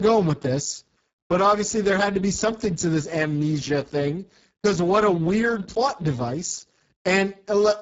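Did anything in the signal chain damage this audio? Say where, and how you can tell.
Yes. Speex codec stage, throughout: hoarse speech with nothing above 7.7 kHz fits a bitrate near 6 kbps, starving the excitation of bits.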